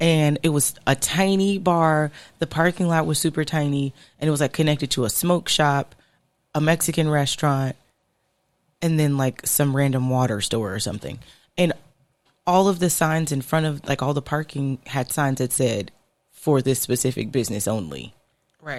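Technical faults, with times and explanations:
No technical faults can be heard in this speech recording, so there are no times or explanations to give.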